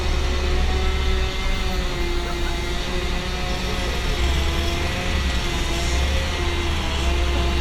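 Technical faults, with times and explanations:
Listening closely, nothing in this recording stood out as a technical problem.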